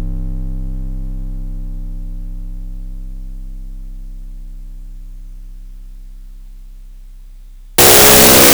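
From 7.78 s to the end at 8.53 s the music collapses into loud, harsh broadband noise: samples built from the wrong bytes, the noisy low-order bits read as the dominant part of each value.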